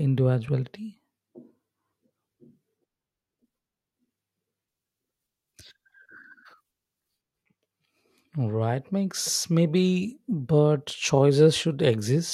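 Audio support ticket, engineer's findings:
Pre-emphasis left on, 4.68 to 7.17 s: treble boost at the source with no matching de-emphasis downstream, shelf fitting the CD 50/15 µs curve. Highs sit about 8 dB hot at 10 kHz against 1 kHz. Speech turns thin, bright, sibilant.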